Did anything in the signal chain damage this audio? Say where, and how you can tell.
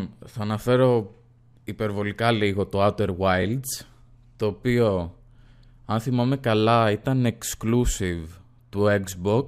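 Yes: chunks out of order at 3.42–3.44 s, a buffer-stage fault. A 10 ms chunk plays one chunk late, giving a brief jumbled moment with three hard joins.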